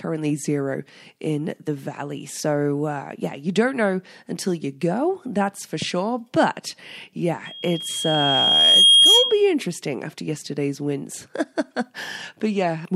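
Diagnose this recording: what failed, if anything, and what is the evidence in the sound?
Loudspeaker feedback squeal, in the acoustic loop between mic and speaker: loop gain tops one at 3.3 kHz, swelling from 7.45 to 9.50 s to about 10 dB over the speech, right before "interesting after yesterday's winds".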